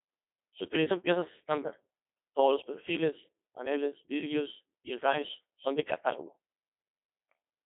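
From start to end, the speech runs through a Codec 2 vocoder. Only pitch, voicing, energy and a spectral envelope survive; sine waves rebuild the voice. It sounds robotic and buzzy, heavily damaged, which fits about 2.4 kbit/s. Nothing sounds above 3.8 kHz.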